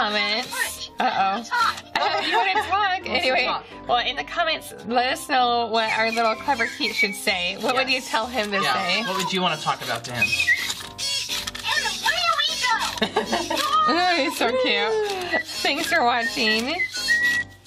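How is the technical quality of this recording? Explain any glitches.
Nothing in the recording stands out as a glitch, so there's really nothing here that needs explaining.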